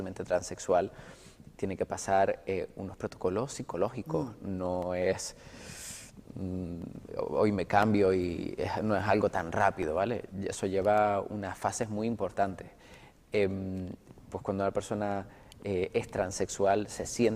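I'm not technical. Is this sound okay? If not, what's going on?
No. From 4.8 to 11.8 seconds, periodic USB or driver dropouts cut tiny silent gaps once per second. Each sounds like a small tick.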